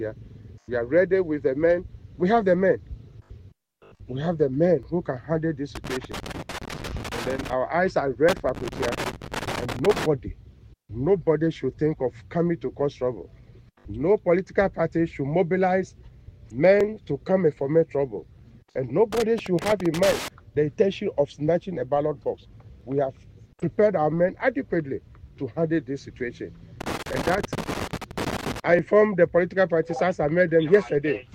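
At 4.83 s, two stream segments overlap: their time stamps claim the same stretch of audio, so the player discards the overlap even though it was never actually doubled. A few milliseconds of real sound vanish and the waveform jumps, producing a small click or skip. The same overlap between stream segments recurs at 16.81, 22.81 and 28.79 s. The stream is cut into 6-second segments.

From 5.75 to 7.53 s and again from 8.29 to 10.06 s, a loose connector crackle appears. A worn or dirty contact makes and breaks the circuit rapidly, chopping the signal on and off. The result is an irregular, scratchy burst of crackle rather than a single tick. It returns from 19.12 to 20.28 s and from 26.81 to 28.60 s, the last burst ending just before the segment overlap at 28.79 s.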